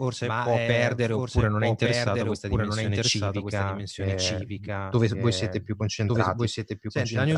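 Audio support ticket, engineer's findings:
Doubled audio track, present throughout. Full-band second copy trailing the original by about one second, roughly 5 dB down. No decay tail or room colouring on the copy; clean duplicate, fixed offset. Likely cause: same signal captured twice via a slower parallel path, or an edit stacking two out-of-step copies. Check routing for a duplicate feed or loopback, then the edit timeline for overlapping regions.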